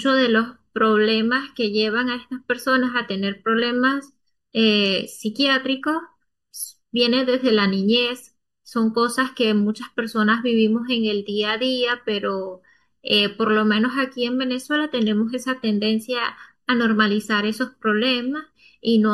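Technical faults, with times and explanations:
Throughout, channel delay (comb filtering): the speech sounds hollow and phasey, with a thin, slightly boxy colour that never changes. One channel arrives a fraction of a millisecond late, and when the two are summed to mono the shared sound cancels at evenly spaced frequencies. The first deep notch sits around 700 Hz, with further notches repeating at regular intervals above it, carving fixed gaps through the speech.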